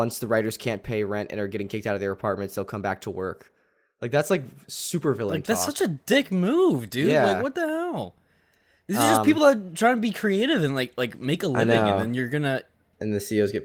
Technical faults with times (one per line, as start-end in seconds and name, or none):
none